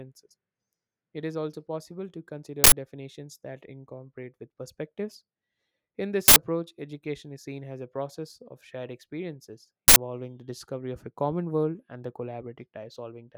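At 2.64, 6.28 and 9.88 s the speech is replaced by an uninitialised buffer: for 80 ms each time, stale memory plays as samples, giving a harsh, loud burst of digital noise. Unlike a dropout or single click, it is a sustained, full-block blast rather than silence or a tick.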